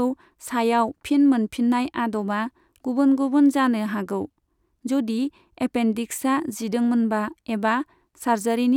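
No technical faults can be heard in this speech.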